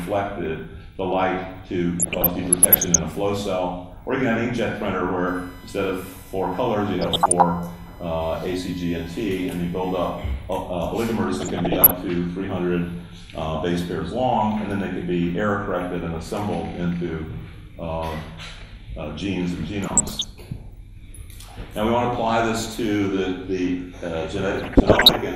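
The whole thing carries the dull, gurgly, granular character you'd expect from MP2 compression, and the codec damage is plainly audible. It's likely MP2 at a low rate, roughly in line with 80 kbps: Layer II splits the audio into 32 sub-bands and shares out too few bits, so upper bands drop out and flicker while the rest are coarsely quantised.

Then there's DAB burbling, at 2.00 to 2.99 s, 7.00 to 7.42 s, 11.34 to 11.91 s, 19.84 to 20.24 s and 24.59 to 25.16 s. Each stretch points to a bit error rate of around 0.7 to 1 percent getting through the error correction into the MP2 data. Corrupted samples drop brief noise blips into individual sub-bands, and damaged scale factors that slip through make bands jump in level for up to a frame.

Overlapping the second burble, from 5.27 to 10.33 s, a USB whine sits under the sound: a steady 1 kHz tone at about 25 dB below the signal. That pitch matches the USB bus's 1 ms frame rhythm, with the current draw leaking into the audio through power or ground and coming out as a fixed-pitch whine.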